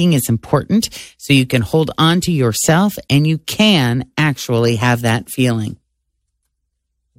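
No technical faults are audible.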